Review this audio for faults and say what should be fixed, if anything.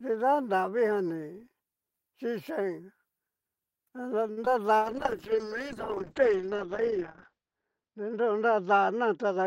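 At 4.31 to 4.38 s there is a short stall from a late packet. The jitter buffer ran dry, so the last sound is held for about 56 ms and then resumes at the same point, adding that much delay. Nothing is lost. A somewhat deeper adaptive jitter buffer would absorb this.

At 4.45 to 4.47 s there is a short concealed packet loss. Roughly 10 ms of audio never arrived and was filled by extending the preceding sound, which is heard as a brief smear before the real signal blends back in. In-band FEC or redundancy would recover gaps this short.

From 4.79 s to the end there is a call bitrate drop. The encoder was pushed to a much lower rate, consistent with a fall from about 32 to 11 kbps. The top end is cut from 20 kHz to 8 kHz, so the speech turns muffled and coarser, with the worst stretch lasting about 2.6 s. Smoother bandwidth estimation and a higher minimum bitrate floor would prevent this.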